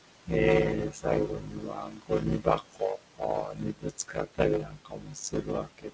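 A speech recording carries a steady buzz and runs slow at its normal pitch, which is a block size mismatch (padded). One stage writes blocks that fit 256 samples into blocks of roughly 480 that the next stage reads, and zeros fill the rest. Nearly half of every block is silence, repeating at 100 Hz, so playback runs at about 0.53 times normal speed. On a waveform this looks like a regular train of flat gaps every 10 ms. A spectrogram shows fine vertical striping and a comb of harmonics at multiples of 100 Hz. Noise suppressor artifacts run through the whole clip. The room noise sits about 16 dB under the speech, and the suppressor pulls it down by about 18 dB between phrases, so the residue rises again under the speech. A spectrogram shows the background flickering in and out in patches across the band, which the call path's G.722 coding leaves empty above 8 kHz. Speech cut by the noise suppressor appears where the suppressor mistakes parts of the speech itself for noise. 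From 0.89 to 1.06 s, soft sounds drop by up to about 15 dB. The longest stretch runs from 1.27 to 4.4 s, with around two seconds of speech swallowed by up to about 19 dB. From 4.6 s to the end, speech drops by up to about 18 dB. On a spectrogram these stretches show speech energy thinned or missing in frames, and the waveform envelope dips where the speech is turned down.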